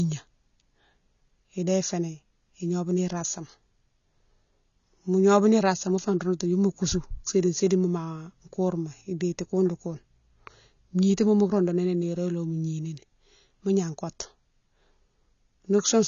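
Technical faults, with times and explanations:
Throughout, AAC compression: nothing is present above about 6.9 kHz, so the speech sounds dull and boxed-in, and the codec damage is plainly audible as a smeared, warbling texture with fizzy sibilants. This is likely AAC-LC coding at a low rate, which fits roughly 24 kbps. To meet that budget the encoder has lowered its cut-off and coarsely quantised the remaining frequency lines, leaving gaps and instability between frames that the ear hears as swirling artefacts.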